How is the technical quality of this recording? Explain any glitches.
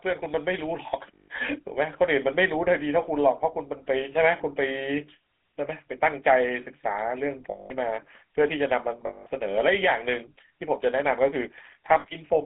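Quality is poor: the speech has passed through a GSM full-rate codec throughout and has four short dropouts covered by frame concealment.

GSM full-rate codec: The speech sits in a narrow band of about 250 Hz to 3.6 kHz with a plainly audible buzzy, gravelly roughness. This fits the 13 kbps coder rebuilding speech from a vocal-tract model and a coarse pulse excitation. Unlike plain band-limiting, the grit is in the voice itself.

Lost GSM frames: At 1.14 to 1.28 s (140 ms), 7.50 to 7.72 s (200 ms), 9.06 to 9.27 s (200 ms) and 12.00 to 12.06 s (40 ms), the sound freezes into a rough, metallic ring. The decoder is repeating the last good frame. Unlike a clean dropout, there is no silent gap.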